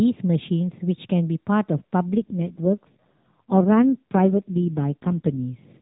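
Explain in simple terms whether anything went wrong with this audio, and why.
From 2.08 s to 5.44 s the speech goes rough and synthetic. That's an AMR rate drop: a weak mobile link squeezed the codec onto fewer bits.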